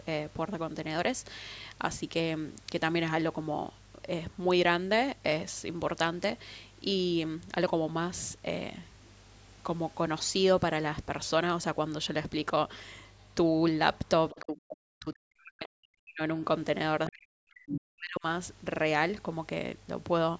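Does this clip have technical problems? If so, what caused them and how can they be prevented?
Yes. From 14.3 to 14.43 s, a brief scrap of the other side's voice leaks through. It sits about 20 dB below the speech. This is likely loudspeaker sound reaching the microphone that the echo canceller did not fully remove. Using a headset prevents this leak.

Speech is suppressed in double talk from 14.42 to 16.44 s and again from 17.09 to 18.26 s. The voice drops by up to around 40 dB. Both sides were likely talking at once, so the echo canceller turned everything down. Headsets and clearer turn-taking avoid it.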